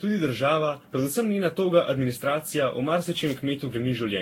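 A speech recording with a swirly, smeared, hollow quality throughout and blurred consonant attacks, likely from generation loss. It sounds worse than a single encode would, which fits about ten passes of Vorbis coding at around 60 kbit/s, each on a shifted frame grid. Nothing is present above 16.6 kHz. From 3.04 to 3.43 s an irregular burst of scratchy crackle cuts through the signal. That is loose connector crackle, where a poor contact chops the line on and off, and it differs from steady codec artefacts by its ragged, intermittent timing.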